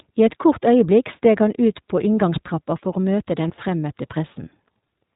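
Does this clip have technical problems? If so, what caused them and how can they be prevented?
Yes. The iLBC codec shapes the whole clip. Nothing above 4 kHz survives, so the speech sounds boxed-in and slightly rough and synthetic, and the coding damage is plainly audible. Each short frame's excitation is coded on its own, which keeps the codec robust but costs naturalness. The sound points to iLBC's higher-rate, 20 ms frame mode. To prevent it, use a wideband codec such as Opus or G.722 wherever both ends support one.

Lost iLBC frames cause a brief glitch from 3.48 to 3.51 s, about one 20 ms frame's worth. The decoder filled the gap by repeating the last pitch cycle with some added noise, so the moment comes out as a short held, faintly buzzy sound rather than silence. Because iLBC frames stand alone, the very next frame decodes cleanly and speech recovers immediately. To prevent it, reduce packet loss on the network path and use a jitter buffer or forward error correction.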